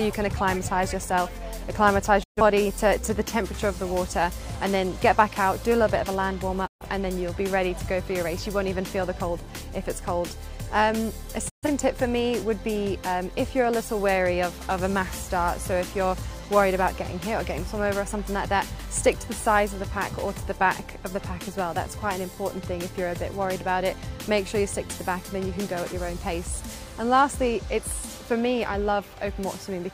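Digital broadcast dropouts occur at 2.22 to 2.41 s, 6.66 to 6.86 s and 11.48 to 11.68 s. Each time the receiver stops getting decodable frames and mutes, fading out over about 20 ms, leaving a hole of roughly 0.2 s, then fading back in. About 128 ms of audio is lost each time, which fits three corrupted frames in a row. The programme resumes further on, and whatever was broadcast during each gap is gone.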